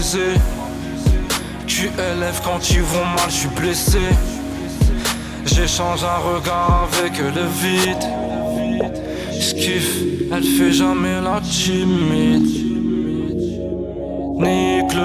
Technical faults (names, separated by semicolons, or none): none